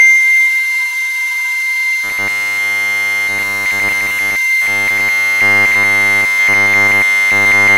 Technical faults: robotic sound from repeated short buffers

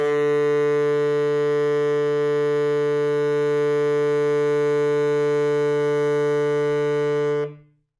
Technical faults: none

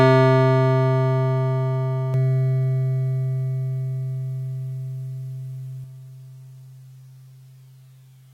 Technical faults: doubled audio track

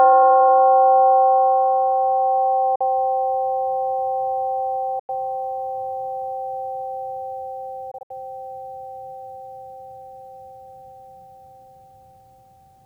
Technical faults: time-stretched section; Bluetooth dropout

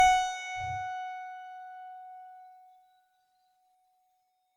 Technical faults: generation loss

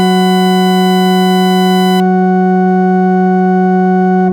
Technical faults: USB whine

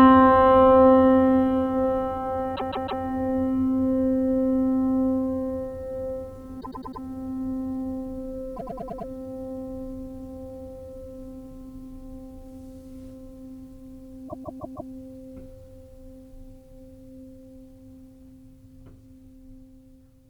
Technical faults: repeated frames

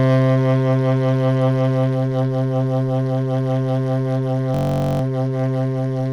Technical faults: system hang loop

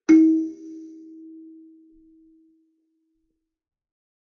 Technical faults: low-bitrate audio saved at a high bitrate

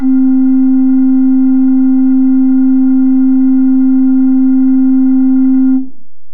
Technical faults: DC offset

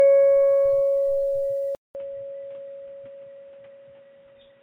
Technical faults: generation loss; input switched to a poorer device

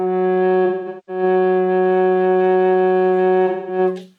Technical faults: AAC frame loss with concealment

